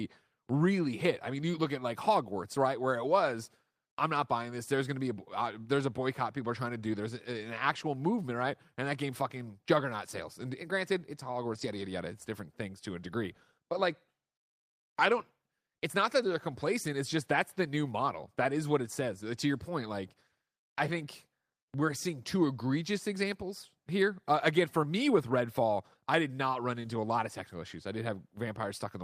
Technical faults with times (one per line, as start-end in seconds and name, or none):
11.53-11.67 lost packet rebuilt from error correction